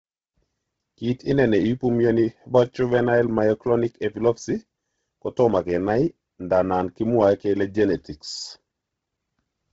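Speech with heavy Bluetooth LC3 compression throughout: nothing above 7.8 kHz, and the upper band has a grainy, breathy noise fill rather than the clean dullness of a plain low-pass. That points to the likely cause, LC3 at a low bitrate around 16 kbps.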